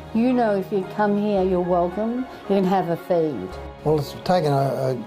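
Nothing is technically wrong with this audio, as no fault can be heard anywhere in it.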